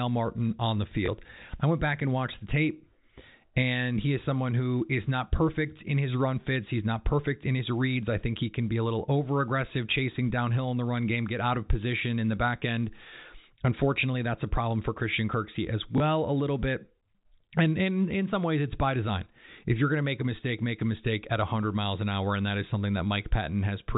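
At 1.06 to 1.08 s, and again at 15.98 to 16.00 s, there is packet loss with the last packet repeated. Each 20 ms gap was filled by replaying the audio just before it, which points to one lost packet. The repeat ignores the pitch, and each sounds like a small blip.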